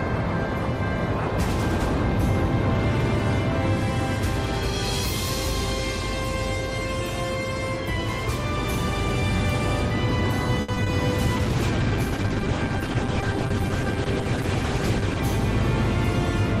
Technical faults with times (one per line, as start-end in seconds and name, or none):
10.61-10.70 short stall from a late packet
10.74-10.88 short concealed packet loss
11.37-15.28 call bitrate drop